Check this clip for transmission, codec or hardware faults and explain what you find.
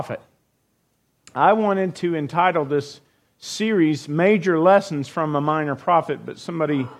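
Nothing here sounds wrong; the audio holds together all the way through, with no fault to point to.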